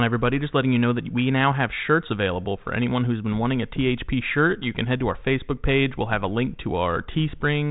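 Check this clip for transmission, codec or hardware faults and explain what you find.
No faults found here.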